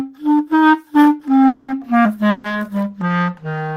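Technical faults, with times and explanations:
1.47–1.80 s and 2.30–2.47 s, call audio freeze: the sound stalls into a fading buzz, 210 ms then 140 ms. Likely late packets emptied the jitter buffer. Nothing is lost; playback resumes later.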